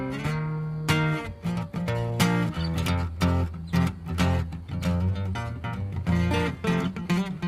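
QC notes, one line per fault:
throughout: clock drift between sender and receiver. The sending clock runs fast by roughly five per cent, so audio arrives a little quicker than the receiver plays it out. The jitter buffer keeps filling, and the receiver has to throw away short slices to keep latency down. The result is a faint, uneven rushing of the sound with no steady rhythm to it. On a waveform the envelope shows occasional abrupt joins, and a spectrogram shows slight discontinuities in otherwise continuous partials.
0.31 to 7.40 s: repeated timing corrections. Across this span the receiver repeatedly cuts short pieces to stay in step with a source running at 105 per cent of its rate. Every edit goes the same way, removing material, and the spacing between them is irregular. Each cut is small, so it comes across as a slight hiccup or a tempo that lurches forward now and then. A waveform shows small splice points where the cycles don't line up, and a spectrogram shows brief vertical seams or tiny broadband ticks at those joins.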